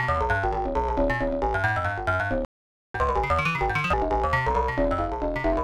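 At 2.45 s the sound simply drops out and stays silent until 2.94 s, a gap of just under half a second. That's a playback stall. The player most likely ran dry of buffered data, or its thread got held up, so it had nothing to send to the output.

Right after that, from 2.94 s to 3.93 s, you get catch-up at higher speed. The player is resampling its backlog to run at 1.5 times normal speed, trying to claw back the time it lost. Because it's resampling rather than time-stretching, pitch rises along with tempo, somewhere around seven semitones. So that one-second stretch sounds hurried and noticeably chipmunk-ish before it drops back to normal speed and pitch at 3.93 s.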